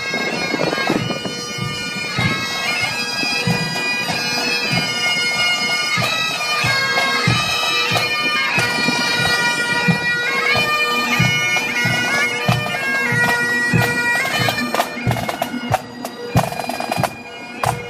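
Nothing stood out as a technical problem anywhere in the recording on listening.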